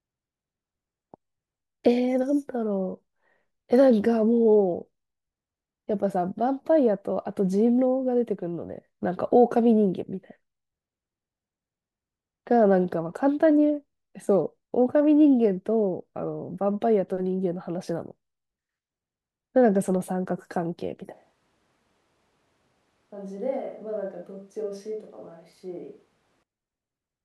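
At 21.13 s the speech suddenly goes roomy and hollow, drops about 10 dB and loses bass, with room noise sitting roughly 35 dB below it. That's a switch to a distant microphone, likely because the close mic's feed failed. It snaps back at 26.43 s.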